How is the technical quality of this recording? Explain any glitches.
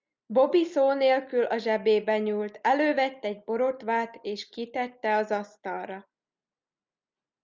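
Nothing here trips the ear at all: there are no glitches to explain, just the speech rolling along without a single technical snag.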